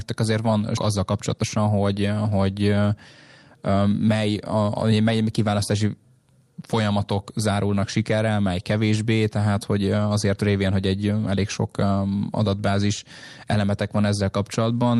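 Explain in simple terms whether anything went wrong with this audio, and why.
Two things went wrong near the start. The first is a skip ahead at 0.77 to 0.79 s, right after "azért van". About a second of speech is missing. Playback jumps straight to later audio with no gap, so the two sides join almost directly.

The second is a jitter buffer speed-up from 0.99 to 2.39 s. The receiver had too much audio waiting. It trimmed tiny slices over and over, about a fifth of a second in total. Speech runs 12% faster at the same pitch and sounds hurried.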